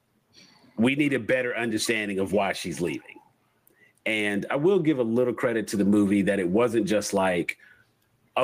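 Throughout the speech, gain pumping is audible: the level is likely set far too high and a fast limiter clamps it on each loud syllable, so the gain swings by roughly 15 dB. On a waveform the envelope looks flattened.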